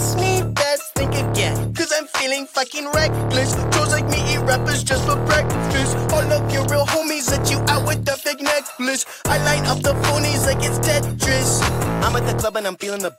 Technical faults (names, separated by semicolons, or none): none